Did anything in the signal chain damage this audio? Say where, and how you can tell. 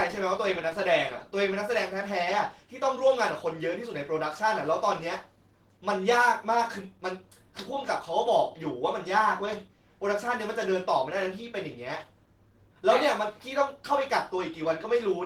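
Yes, at the codec: Opus voice compression at 16 kbps in hybrid mode is starved of bits, so coarse excitation coding leaves plainly audible roughness throughout, though the band stays full.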